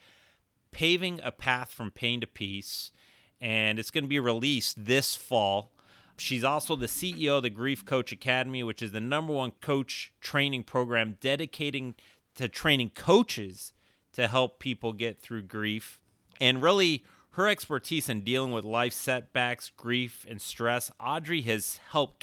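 No technical faults can be heard anywhere in this recording, which stays steady and intact throughout.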